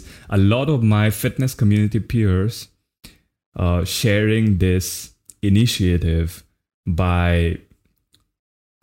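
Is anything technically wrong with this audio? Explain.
Yes. From 5.56 to 5.62 s the speech crackles briefly: hard clipping, where peaks exceeding a stage's limit by about 2 dB are cut flat, adding harsh high harmonics.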